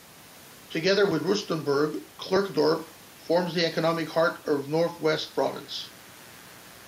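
Speech recording with mains buzz entering at 5.05 s and continuing to the end at 6.88 s. The buzz is steady and raspy, built on 60 Hz harmonics that extend up to several kilohertz, and it sits roughly 30 dB below the speech. That spectrum comes from sharp switching spikes at twice the mains rate, as from a dimmer, a rectifier or an unshielded cable. The room noise, about 28 dB below the speech, is part of the recording and unaffected.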